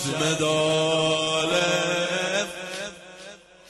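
From 0.55 to 1.70 s, packets arrived late or more slowly than playback consumed them, so the jitter buffer repeatedly ran dry, producing repeated stalls (stutter). About fifteen brief holds, none longer than 25 ms, stretch the last sound forward, making the audio drag and stutter without losing anything.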